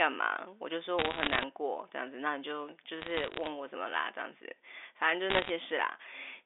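Three short bursts of bit errors on a digital phone line crackle through this speech: 0.99 to 1.44 s, 3.00 to 3.50 s, and 5.30 to 5.50 s. Flipped bits corrupt single samples of the mu-law G.711 stream, and hits on the sign or upper bits jump sharply as ticks. The first burst is densest, roughly one bit in seventy. The middle one is sparser, and the last sits between. The speech underneath stays unchanged, band-limited to telephone width.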